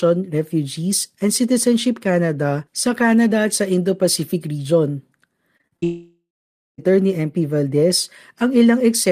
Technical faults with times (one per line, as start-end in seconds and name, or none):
5.57-5.84 repeated packet loss (robotic sound)
5.84-6.80 long network dropout